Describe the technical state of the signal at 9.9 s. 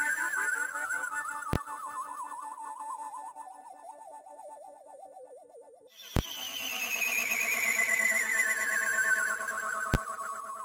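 At 9.94 s there's a single hard bang, and it's a case of invalid numbers at full scale. Somewhere in the processing, a calculation went infinite or invalid, and those values got clamped to the maximum positive or negative level. The output is pinned flat at one extreme value, far beyond the audio's peaks, for a block lasting about 12 ms, which fits a 512-sample block. That's too short to hear as separate pops at the start and end, so it lands as one loud crack.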